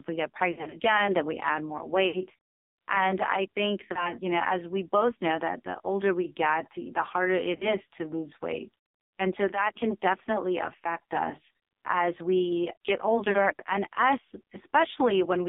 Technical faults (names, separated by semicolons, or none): AMR narrowband mobile codec; lost AMR speech frames